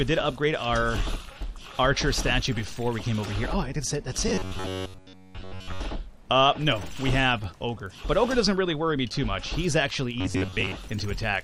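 Audio likely arrived too seldom to keep the output fed, so the playback path filled the gaps by repeating one short buffer of about 10.7 ms while roughly 70 percent of the real audio was skipped. The result is robotic sound from repeated short buffers from 4.28 to 5.81 s and again from 10.21 to 10.72 s: a rigid, metallic buzz locked at 93.8 Hz that still loosely follows the underlying sound.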